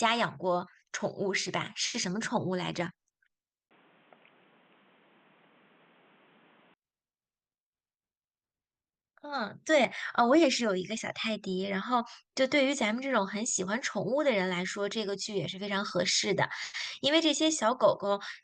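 At 3.69 s the speech drops out for about 20 ms, then comes back dull and boxy, with nothing above 3.8 kHz, a few dB different in level and with a new noise floor. That's likely the input switched to a poorer device, until 6.76 s.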